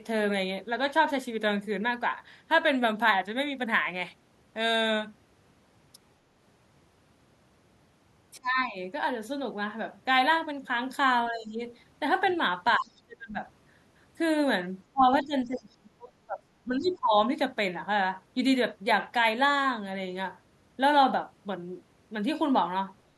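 From 8.37 to 8.77 s the speech sinks by about 25 dB, the first case of speech suppressed in double talk. It recurs at 11.31–11.61 s (a shallower dip, about 10 dB), 12.78–13.38 s (about 30 dB), 14.92–15.03 s, 15.23–16.44 s (about 30 dB) and 16.65–17.14 s (about 20 dB). The likely cause is an echo canceller that heard both sides talking at once and turned everything down.

At 12.25–12.37 s, and again at 15.44–15.63 s inside the longest dip, a faint second voice comes through. This is the other side's voice leaking through, about 25 dB and then about 35 dB below the speech. It is likely far-end sound from the loudspeaker that the canceller failed to remove. It is a different talker, coming through in scraps, not a delayed copy of the speech itself as room echo would be.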